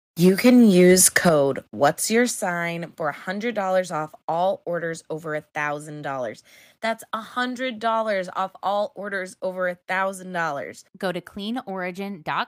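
From 0.24 to 1.29 s there is microphone overload: the loudest speech peaks have their tops cut off, adding a crackling edge. The likely cause is input gain set about 8 dB too high for the converter, clipping roughly 3% of samples. A microphone volume step-down follows at 0.29 s (about 3 dB), 1.29 s (about 9 dB) and 2.31 s (about 6 dB). Speech and background drop abruptly, about 18 dB in total, likely from call software lowering the device's input volume.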